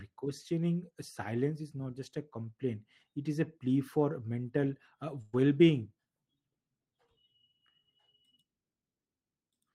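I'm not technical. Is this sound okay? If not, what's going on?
No. At about 5.21 to 5.35 s, right after "plea for mental uh", there is a burst of packet loss: about 120 ms of speech never arrived, so the player stretched the last sound into a fading buzz before jumping ahead.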